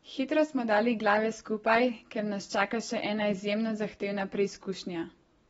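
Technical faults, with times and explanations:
Throughout: AAC compression, likely at a low bitrate. The speech has no content above about 7.6 kHz, so it sounds dull and muffled, and the codec damage is plainly audible as a smeared, warbling texture with fizz on sibilants. At this rate the encoder spends its few bits on the strongest bands, cutting off the top and coarsely quantising the rest. A spectrogram shows a flat ceiling near 7.6 kHz with patchy holes in the upper bands.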